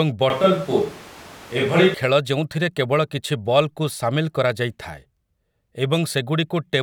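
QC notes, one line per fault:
0.30–1.94 s, switch to a distant microphone: the close microphone's feed likely dropped out and a microphone farther from the talker took over, so the speech turns abruptly roomy and hollow with thinner bass, because the far microphone captures more room reflections relative to the direct sound. The level stays about the same, but room noise rises to roughly 25 dB below the speech. The close sound returns just as suddenly before "ଖେଳ ଯେଉଁଥିରେ କେବଳ".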